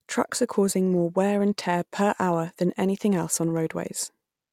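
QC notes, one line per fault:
No faults found in this speech clip. Nothing needs flagging on this pass.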